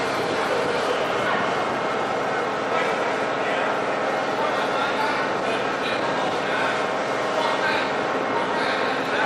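No technical faults can be heard anywhere in this audio. Nothing in the sound calls for a fix or an explanation.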